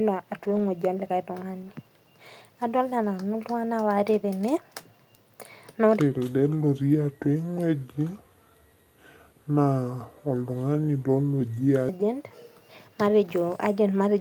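Around 0.43 to 0.69 s the speech turns briefly grainy and hissy: a lost packet rebuilt from error correction, here several separate ones. Each missing packet was covered by the low-bitrate spare copy riding in the next one, so there's no dropout, just about 140 ms of rougher, noisier sound, which fits seven separate 20 ms packets. A single one recurs at 3.03 to 3.05 s, a quick 20 ms blip of the same coarse texture.

From 6.0 s to 11.9 s there's a section at the wrong speed. Everything drags to about 0.686 times normal, so the speech comes out slow and heavy, with pitch dropping roughly seven semitones along with the tempo. That tie between speed and pitch is the giveaway; it's likely that this stretch was played back against the wrong clock, and it snaps back to normal at 11.9 s.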